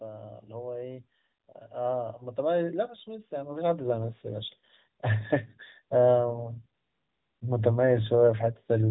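Automatic gain rising runs from 1.70 to 4.57 s. The gain control judged the speech input too quiet and lifted its gain by about 12 dB over almost three seconds, so voice and background noise swell up together rather than the speech alone growing louder.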